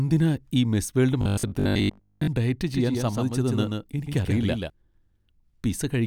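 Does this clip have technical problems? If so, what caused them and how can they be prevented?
Yes. Robotic sound from repeated short buffers runs from 1.21 to 2.29 s, just after "ഈ മിസ് വേൾഡ്". The speech turns into a rigid metallic buzz at 50 Hz, which fits a 20 ms buffer being replayed for most of that stretch. The likely cause is audio arriving too seldom. Prevent it with larger jitter buffers and a steadier network or CPU scheduling.

A doubled audio track runs from 2.74 to 4.70 s. A full-band copy about 5 dB quieter trails the speech by roughly 150 ms and starts and stops abruptly. It is likely a second, slower capture path or an overlapping edit. Prevent it by monitoring a single input route and checking edits for duplicated regions.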